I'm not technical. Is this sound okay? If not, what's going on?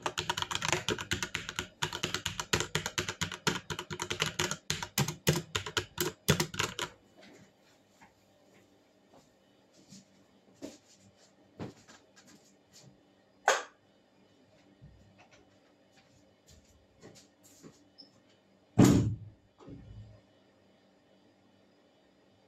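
Yes, this sound is okay, and there's nothing going on with it that needs fixing.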